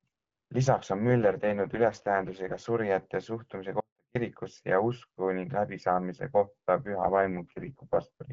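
AMR rate drop, 1.09 to 2.60 s and again 6.86 to 8.04 s: the speech turns rough and synthetic with no gap or band change, which fits a fall from 12.65 to 6.6 kbit/s. Audio dropout to a faint residue, 3.80 to 4.15 s: the speech cuts out abruptly for 350 ms, leaving only a faint trace roughly 40 dB down, likely a lost signal with the path still live.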